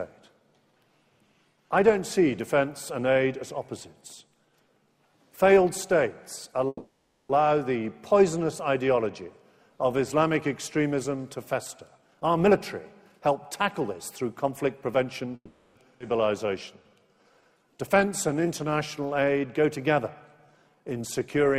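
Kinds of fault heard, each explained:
Call audio freeze: At 6.67 to 7.32 s the sound stalls for about 0.65 s. The last bit of audio is stretched into a fading buzz for roughly 620 ms, with a brief 30 ms silence, and then playback resumes exactly where it stopped, so nothing is lost and the delay grows by 620 ms. The same happens at 15.36 to 15.79 s, a 400 ms fill with 60 ms of silence. Both likely come from packets held up in transit until the jitter buffer ran dry.
Jitter buffer speed-up: With the buffer holding more audio than it aims for, the receiver trims short pitch-period slices in quick succession to catch up. From 11.98 to 12.55 s the audio runs at 125% speed with no change in pitch, shedding around 150 ms, and sounds noticeably rushed. A milder pass from 13.17 to 15.34 s plays at 109% and removes roughly 200 ms, giving a slightly hurried feel over two seconds.
Skip ahead: At 16.0 s playback jumps forward, discarding about half a second of audio. 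Only about 10 ms of fill bridges the two sides, so the material before and after the jump is joined almost directly and the continuity breaks abruptly. This is what happens when a stretch is dropped while later audio is already queued, and it cuts the accumulated delay by about 500 ms in one step.
Jitter buffer slow-down: With the buffer now short, the receiver rebuilds its reserve by repeating single pitch periods and bits of pauses. From 16.46 to 19.94 s the audio plays at 91% speed at unchanged pitch, adding 311 ms and drawing sounds out. A second stretch from 20.37 to 21.20 s runs at 89%, adding 103 ms, with the same dragged quality.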